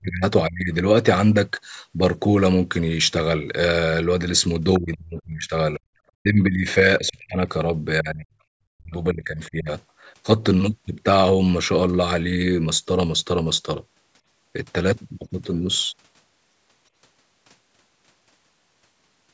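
From 0.0 to 0.72 s the speech dips sharply, by roughly 30 dB. This is speech suppressed in double talk. The likely cause is an echo canceller that heard both sides at once and turned the talker down with the echo.

At 4.73 to 4.95 s the other side's voice leaks through. It is a faint scrap, roughly 20 dB below the speech. The canceller likely missed part of the loudspeaker signal. A second brief leak comes at 5.74 to 5.8 s.

Double-talk suppression returns at 4.79 to 5.8 s, 6.16 to 6.66 s, 6.99 to 7.42 s, 8.02 to 8.31 s and 8.67 to 9.69 s. The speech dips by roughly 25 to 40 dB. The deepest cuts nearly silence it. The last one lasts about a second.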